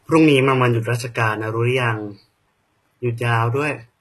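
Throughout, likely HE-AAC compression near 16 kbps rebuilds the treble from lower bands, so s sounds turn gritty and metallic, and nothing reaches above 12.3 kHz.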